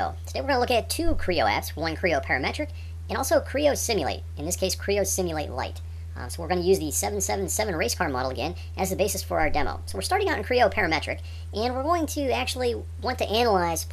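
From the first second to the end, the audio runs fast and sharp, the signature of a wrong sample rate. The samples are being clocked out faster than they were captured, with no rate conversion, so timing and pitch shift together. Everything moves about 1.38 times too quickly and sits roughly 5.55 semitones high, a ratio that fits material recorded at 32 kHz being played back at 44.1 kHz. The result is hurried, thin and chipmunk-like throughout.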